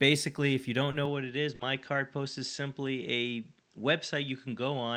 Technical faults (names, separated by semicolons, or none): lost packet rebuilt from error correction; short concealed packet loss; input switched to a poorer device